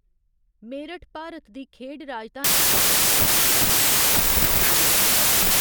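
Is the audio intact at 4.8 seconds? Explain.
No. From 2.44 s, right after "मेरठ भारत दी खेढ", to the end, a wrong sample width reads 24-bit samples as 16-bit. This gives loud noise over a slowed (0.667×) copy of the speech. Unlike a byte-order swap, the speed and pitch also change.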